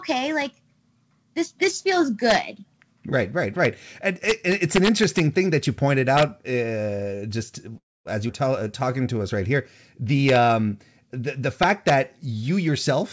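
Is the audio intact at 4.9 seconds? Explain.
No, integer overflow runs from 4.29 to 5.20 s: speech pushed about 3 dB over full scale wraps to the opposite sign, giving violent cracks, sudden sign flips in the waveform and broadband vertical spectrogram streaks.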